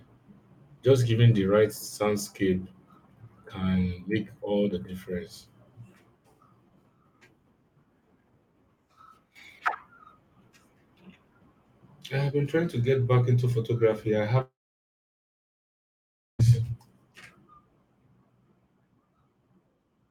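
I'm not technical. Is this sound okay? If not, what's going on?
No. There is a long network dropout from about 14.41 to 16.41 seconds. The speech suddenly stops, a short fading buzz carries on from the last sound, and then almost two seconds of near-silence follow before the speech picks up again. The likely cause is that the connection stopped delivering audio for roughly two seconds. The player filled the gap as best it could, but the speech from that stretch is missing and never comes back.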